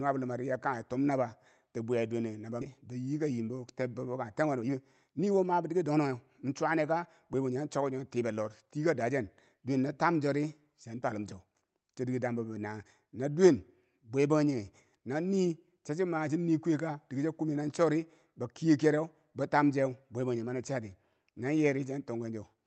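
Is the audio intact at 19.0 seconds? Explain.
Yes, the speech at 19.0 seconds is intact, with no dropout, glitch or other fault at that moment beyond the ordinary coding character of the Opus call path it passed through.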